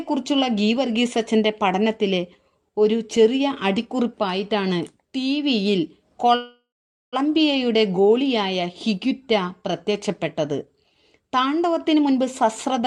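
At 6.35 s the incoming packets were likely held up in transit, draining the jitter buffer and producing a call audio freeze that lasts until 7.16 s. With nothing new to play, the receiver stretched out the last sound as a decaying buzz or hiss, which dies into about 480 ms of silence. When the packets arrive, playback resumes exactly where it stopped. Nothing is lost, but a 771 ms gap has been inserted and the delay grows by the same amount.

From 11.84 s to the end, the receiver cuts its buffered delay with a jitter buffer speed-up. It repeatedly cuts out tiny slices, each one or a few pitch periods long, removing roughly 150 ms in total. The audio plays at about 116% of its normal rate with the pitch unchanged, so this final second sounds noticeably rushed.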